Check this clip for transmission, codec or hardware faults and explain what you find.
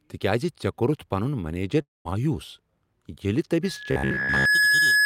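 Three faults are audible in this speech clip.

From 1.81 to 2.07 s there is a break that sounds like a long network dropout. The receiver likely ran out of packets. It stretches the last sound into a fading buzz, then falls to near silence for about 190 ms. About 240 ms of speech is lost.

A loudspeaker feedback squeal starts at 3.62 s and runs to the end. The microphone is hearing its own loudspeaker. At 1.7 kHz the loop gain passes one, so that tone feeds itself. It swells over about a second to roughly 5 dB above the speech.

From 3.91 to 4.45 s the speech turns into robotic sound from repeated short buffers. It becomes a rigid, metallic buzz at 66.8 Hz. This likely comes from audio arriving too seldom. The software repeats one stretch of about 15 ms, and most of the real sound is skipped.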